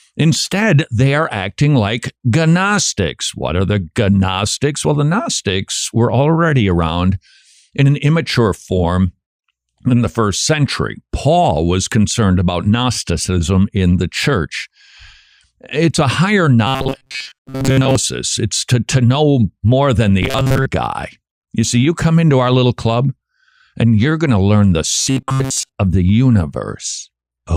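From 16.67 to 17.96 s, 20.22 to 20.66 s and 24.95 to 25.75 s the speech goes robotic, a rigid 133 Hz metallic buzz, likely from repeated short buffers of about 7.5 ms standing in for most of the audio.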